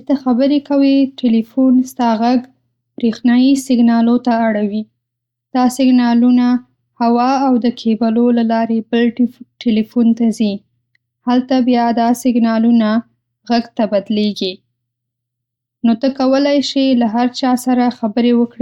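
No technical faults are audible.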